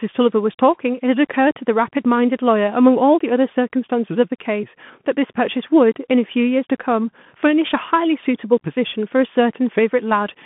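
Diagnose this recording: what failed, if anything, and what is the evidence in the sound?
The codec stage failed: a Bluetooth CVSD headset codec runs throughout. The speech sits in a narrow 150 Hz to 3.4 kHz band with nothing above 3.7 kHz. Sibilants turn scratchy and a granular hiss is audible. The one-bit adaptive-step encoding cannot keep pace with loud high-frequency sound, which fits a 64 kbit/s CVSD link.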